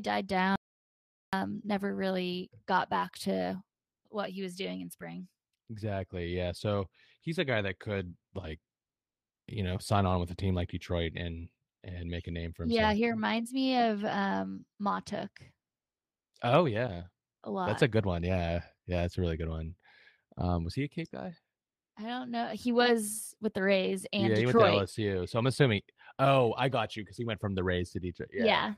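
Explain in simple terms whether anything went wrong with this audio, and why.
Audio dropout to silence, from 0.56 to 1.33 s: the speech cuts off abruptly and about 0.77 seconds of total, dead silence follows, with no background hiss at all. The input signal was likely lost briefly while the recording carried on writing blank sound, so that stretch is gone.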